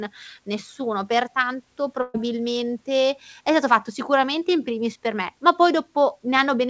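At 2.02 s a burst of packet loss cuts into the speech: a run of packets never arrived in time, so the receiver covered about 120 ms, to 2.16 s, by extending the last sound and fading it down. That stretch turns into a held, dimming buzz or hiss rather than silence, and the speech then picks up about 120 ms further along, with that part gone. The call codec's band limit, with nothing above 8 kHz, fits G.722.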